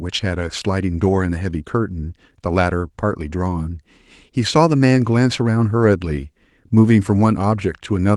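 Nothing stood out on listening to this speech recording, which comes through an Opus call path.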